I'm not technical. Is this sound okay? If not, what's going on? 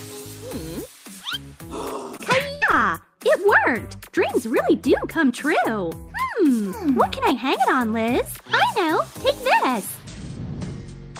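No. Twice, a tiny slice of the sound arrived too late, a short concealed packet loss, at 2.17 to 2.21 s and again at 2.71 to 2.75 s. The receiver patched each hole by stretching the sound just before it, so you hear a quick smear or wobble.

Between those, at 2.55 to 2.63 s, a longer run of data went missing, a burst of packet loss. The receiver kept the last sound going for about 65 ms as a fading buzz or hiss, then jumped ahead, skipping about 60 ms.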